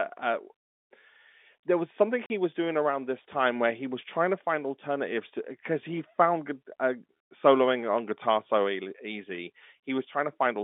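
At 2.26 to 2.30 s, between "there was something" and "was doing around this", packet loss filled with silence punches a 40 ms hole in the speech, which fits two lost 20 ms packets. Hard edges frame true silence, not the smeared repeat of concealment.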